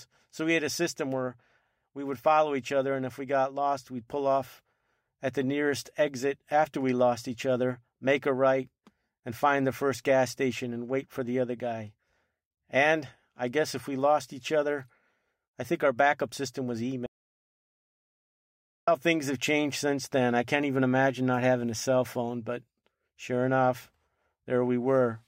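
At 17.06 s the speech cuts off abruptly and the track falls to silence, with no room tone, until it resumes mid-flow at 18.88 s, about 1.81 s lost. This audio dropout to silence likely comes from the input briefly disconnecting while recording continued writing silence.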